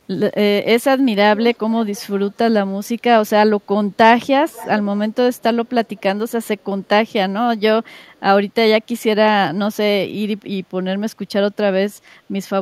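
Echo leak appears four times: 1.54 to 1.58 s, 1.94 to 2.01 s, 4.49 to 4.69 s and 5.66 to 6.01 s. Each is a faint copy of the speech trailing the original by 408 ms, most likely because a far-end loudspeaker fed the microphone and the echo canceller let part of it through. The copies sit well below the direct speech, very faint in the first and last bursts and loudest in the third, at about 20 dB down.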